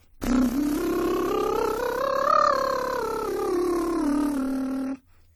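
A music clip that sounds swirly and hollow from start to finish, with smeared transients and blurred attacks beyond what a single encode would leave. This is likely generation loss: repeated lossy passes, about four, fitting AAC-LC around 64 kbit/s, each re-quantising on a shifted frame grid.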